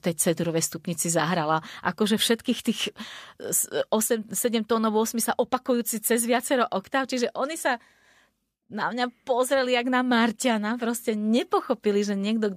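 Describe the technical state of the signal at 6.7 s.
At 6.7 s the speech carries clock slip clicks, faint regular ticks roughly every 0.3 s, running from 0.16 s to 12.37 s. Each tick is likely a single sample dropped or repeated as two free-running clocks drift apart, consistent with an error around 70 ppm.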